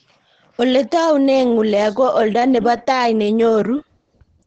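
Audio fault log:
Throughout, Opus compression: The speech sounds muffled and hoarse throughout, with heavy codec damage. Nothing is heard above 8.6 kHz. This likely comes from Opus switching to its SILK speech mode. The narrowed band and rough texture fit a bitrate near 12 kbps.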